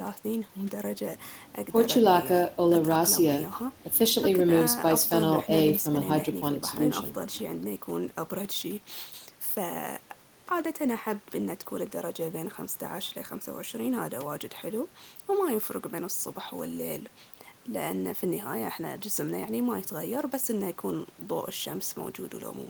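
No technical faults are audible anywhere in the recording.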